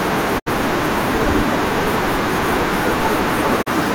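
At 0.38 to 0.48 s and 3.61 to 3.68 s, a digital broadcast dropout fades the speech to silence within 20 ms. Unlike a stall, the missing audio is skipped, not delayed.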